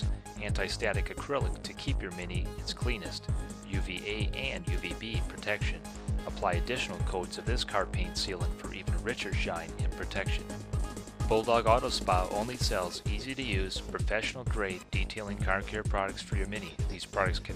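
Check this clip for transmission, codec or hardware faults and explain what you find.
No transmission, codec or hardware faults.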